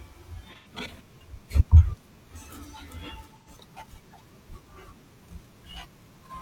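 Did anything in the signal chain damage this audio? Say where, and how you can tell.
Yes. Short smeared patches at 0.56–0.67 s and 3.38–3.49 s indicate AAC frame loss with concealment at the codec stage: the decoder rebuilt about 85 ms from the last good spectrum.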